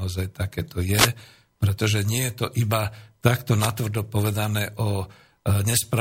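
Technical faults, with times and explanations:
0.94–1.09 s and 3.57–3.72 s, wireless microphone noise hit: brief static swishes, just before "pretože nie" and just after "iba takto", as FM signal fades let receiver noise through.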